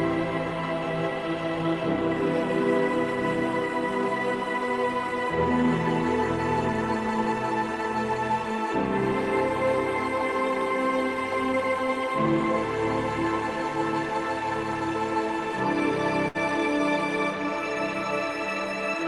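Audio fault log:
16.28–16.37 s, burst of packet loss: the sound smears into a brief fading fill for about 64 ms, then jumps ahead with roughly 60 ms missing, because consecutive packets on the call path were lost or arrived too late and the receiver stretched the last audio while lowering it.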